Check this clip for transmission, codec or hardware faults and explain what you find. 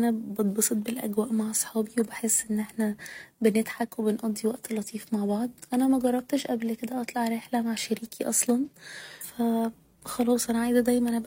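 One fault is audible, a stream segment skipped, near the end of the speech.

At 9.20 to 9.25 s, just after "رحلة مع شريكي أصلا", the speech jumps abruptly forward with a brief blip, as if a piece of the recording has gone missing rather than fading or pausing. The likely cause is that one chunk of a segmented stream failed to arrive or load, so the player dropped it and carried on from the next segment, splicing the two edges together.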